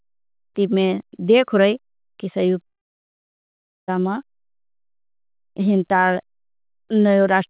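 A speech recording carried over a narrowband call link with nothing above 4 kHz, with a long network dropout, likely a lost run of packets, from 2.66 to 3.90 s. The receiver stretches the last sound into a brief fading buzz or hiss, then about 1.2 s of silence, and the speech resumes with that stretch missing.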